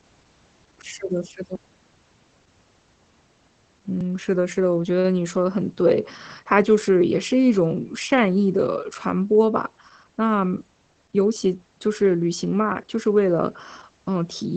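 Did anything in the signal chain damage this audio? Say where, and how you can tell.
Yes. At the codec stage, the speech went through Opus voice compression at a low rate, 12 kbps, in its SILK mode, with the band stopping near 8.5 kHz. Coarse excitation coding leaves the voice plainly muffled, slightly hoarse and faintly robotic throughout.

At the buffer stage there is a skip at 4.01 s: about 50 ms of audio is missing between chunks, with the two sides butted together and no silence. The likely cause is a recorder dropping samples while it closed one chunk and opened the next.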